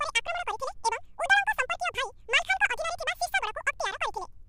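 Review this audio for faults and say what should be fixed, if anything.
The whole recording has the fault of audio being read two samples at a time, at double speed. The speech plays twice as fast as it should. Its pitch sits 12 semitones high, a full octave up. The reader took each pair of samples as one frame. That points to a mono file being read as stereo, or to samples assumed twice their real width. To prevent it, read the channel count and sample format from the file header.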